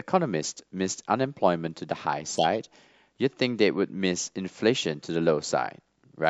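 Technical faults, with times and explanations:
0.93 to 6.04 s, periodic USB or driver dropouts: about every 1.02 s a tiny fraction of a millisecond of speech is skipped. A background task briefly stalls the USB bus or audio driver, leaving a small, evenly spaced tick wherever signal is present.
2.36 to 2.56 s, corrupt frame decoded: a run of compressed frames with flipped bits was decoded as if valid. Misread gains and codes scatter energy to wrong frequencies, producing a squeaky, noisy burst peaking around -10 dBFS for about 0.2 s.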